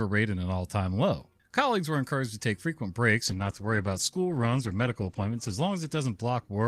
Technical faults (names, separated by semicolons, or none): call bitrate drop